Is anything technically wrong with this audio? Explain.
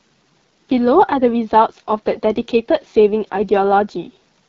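Yes. Throughout, the speech passes through the AMR wideband (HD Voice) codec at one of its two lowest rates, likely 8.85 kbit/s, leaving plainly audible rough, raspy distortion.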